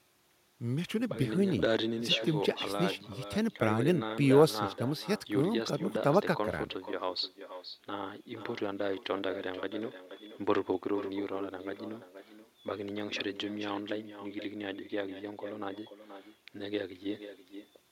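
Throughout the speech, every phrase is followed by a fainter repeat, the mark of echo with no canceller: the far end's loudspeaker feeds its microphone and nothing subtracts that path, so the audio returns after the network round trip, roughly half a second late and about 11 dB down, and thinner. On a spectrogram each syllable's harmonics reappear as a weaker copy shifted right; the waveform shows smaller ghost envelopes trailing each burst.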